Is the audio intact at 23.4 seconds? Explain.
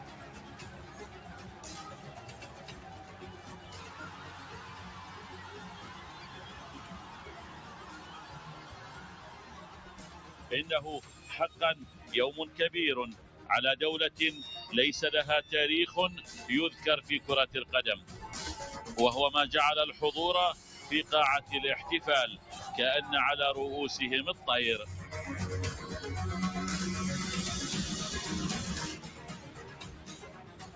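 No. At 23.4 s, as throughout the clip, a noise suppressor applied to music or sounds treats sustained tones and tails as noise, pulling them down by around 20 dB while attacks pass. Unlike compressor pumping, the dips follow steadiness, not loudness.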